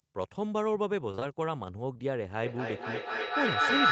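Short concealed packet loss hits speech in two runs: three consecutive gaps of about 20 ms each from 1.11 to 1.23 s, then two more from 1.93 to 2.01 s. The receiver covered each hole by extending the preceding sound, so these spots come out as a brief smear or wobble. On a spectrogram, harmonics stretch flat and slightly blurred, with a soft seam where real audio resumes.

From 2.43 s to the end, a feedback echo between two devices takes over. Each phrase returns roughly every fifth of a second, growing thinner and more ringing. Because the loop is strong, reaching about 8 dB above the speech, repeats pile up rather than decaying. A spectrogram shows evenly spaced, smeared copies stacking into a dense band that stays below the 8 kHz ceiling set by the call codec's bandwidth.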